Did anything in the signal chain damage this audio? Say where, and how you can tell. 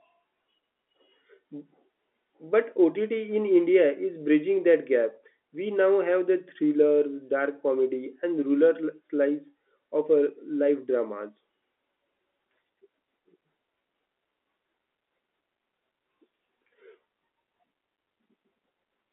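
No, nothing in the chain damaged this speech.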